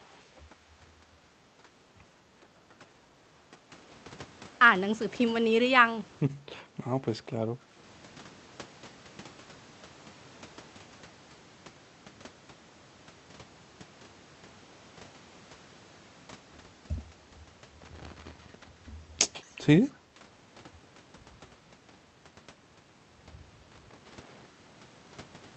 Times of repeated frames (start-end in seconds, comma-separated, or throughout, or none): none